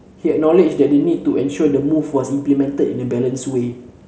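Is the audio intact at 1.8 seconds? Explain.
Yes, the speech at 1.8 seconds is intact, with nothing breaking into it at that moment.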